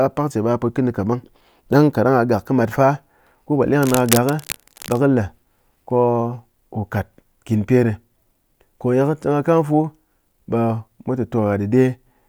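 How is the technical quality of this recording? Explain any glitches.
One glitch affects the recording. From 3.82 to 4.98 s there is cable scratch noise. A worn cable or connector was likely moved, making its contact resistance jump rapidly. This lays dense, uneven bursts of scratching and rustling over the speech, roughly 10 dB below it.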